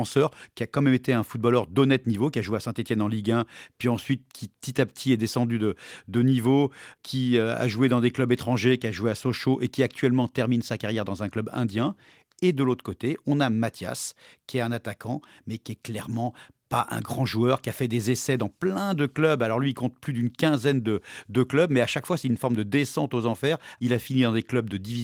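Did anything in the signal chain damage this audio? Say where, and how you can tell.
No, nothing along the chain damaged this speech, and the voice compression it passed through at around 24 kbps is keeping the full band intact.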